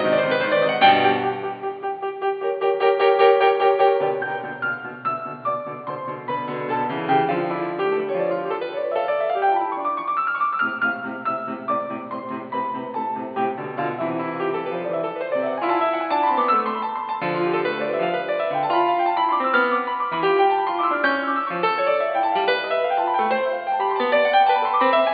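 Nothing technically wrong turns up anywhere in this music clip, so there's no fault to point to and no cause to chase.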